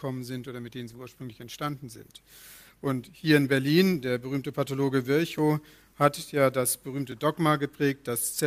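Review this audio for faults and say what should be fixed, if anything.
From 0.45 s to about 4.97 s there is a call bitrate drop: the sound turns rough and muffled, then recovers. The call's bandwidth estimate fell and the encoder coded far more coarsely, consistent with a fall from around 128 kbps to about 22 kbps, held at its lowest for roughly 2.5 s, which also stripped the upper band. On a spectrogram the high frequencies vanish abruptly across that span and return afterwards. Tuning the bandwidth estimator to back off less aggressively, or adding headroom in the network path, would prevent it.

Two blocks of digital silence occur, at 5.38 s (1.45 ms, which fits a dropout of 64 samples) and at 7.12 s (2.18 ms). Each is heard as a brief tick. Samples were replaced by zeros, most likely because the output buffer wasn't filled in time, with a hard cut out and back and no fade. On the waveform each appears as a flat line near zero with vertical edges, and on a spectrogram as a thin broadband vertical stripe. 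Larger buffers or a higher-priority audio thread would prevent these underruns.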